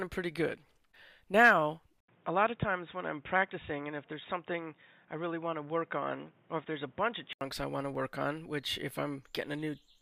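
At 2.00 s an 80 ms silence gives way to dull, slightly quieter sound with a faint new noise floor, lasting until 7.41 s. The input was likely switched to a poorer device. A spectrogram shows a flat ceiling at 3.8 kHz, and the waveform a gap followed by a smaller envelope.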